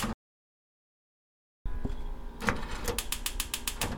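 From 0.13 to 1.66 s the input was likely lost while recording continued, an audio dropout to silence: the sound cuts off into 1.53 s of silence with no room tone.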